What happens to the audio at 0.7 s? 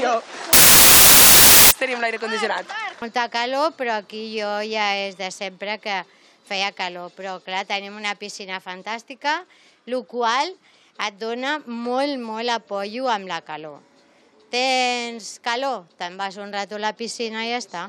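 At 0.7 s the audio is buried in loud, harsh broadband noise, because from 0.53 s to 1.71 s the samples are built from the wrong bytes: each value is assembled from misaligned or swapped bytes, so the rapidly changing low bits land in the most significant positions. On a spectrogram the stretch shows as flat, full-band energy hiding the normal structure; the waveform turns into dense hash.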